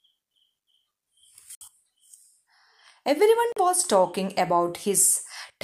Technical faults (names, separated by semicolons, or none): Bluetooth dropout